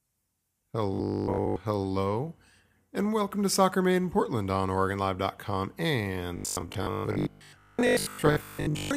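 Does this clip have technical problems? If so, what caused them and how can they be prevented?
Yes: robotic sound from repeated short buffers at 0.94–1.56 s and 6.37–8.96 s, a rigid 50 Hz buzz from likely 20 ms chunks repeated instead of fresh speech. Larger buffers or jitter buffering would prevent it.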